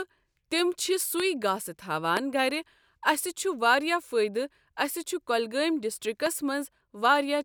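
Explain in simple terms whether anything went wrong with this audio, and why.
Three loud pops jump out over the speech at 1.2, 2.17 and 6.26 seconds. They're sharp clicks, likely from a switch, static or electrical glitch.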